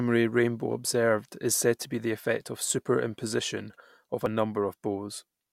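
Right after "said to be the" at 2.41 s, then at 3.39 and 4.26 s, the speech jumps ahead a hair, likely a dropped buffer (overrun) losing around 10 ms each time.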